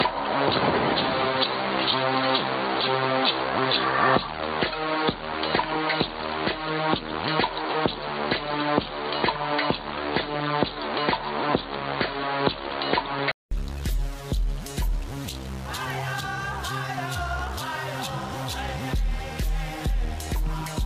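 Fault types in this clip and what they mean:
Input switched to a poorer device: From the start until 13.51 s, the sound is dull and boxy, with nothing above 4.6 kHz. It then clears suddenly after a gap of 200 ms. The level shifts by a few decibels at that point, and the background noise changes character, sitting well below the sound. This pattern likely comes from the system recording through a narrower-band microphone or headset profile before moving to a better input.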